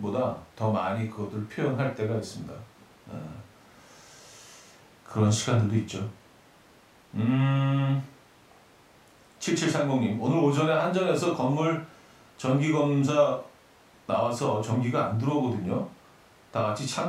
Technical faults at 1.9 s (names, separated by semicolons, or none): none